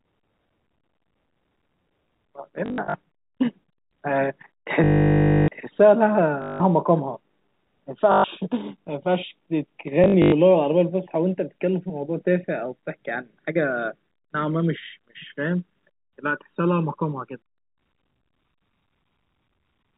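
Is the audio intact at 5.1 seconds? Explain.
No. At 5.1 s the audio falls inside a stretch of packet loss with last packet repeated, from 4.84 to 5.48 s. For 640 ms the missing data is filled by replaying the previous packet. The run buzzes as a robotic stutter at 50 Hz, which fits 20 ms packets. The channels drifting apart fault also covers this moment. Clocks roughly 50 ppm apart let the delay between channels slide toward about 1 ms, which is heard in mono as slow flanging.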